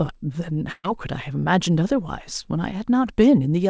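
At 0.72 s the speech stops moving and the last sound is held and fades for about 0.12 s, with a brief silence near its end, before the talker resumes at 0.86 s with roughly 120 ms of the utterance gone. This is a burst of packet loss: consecutive packets never arrived in time, so the receiver stretched the final sound it had while lowering its level, then continued from later audio. The call path's band limit, with nothing above 8 kHz, fits G.722 at 64 kbps.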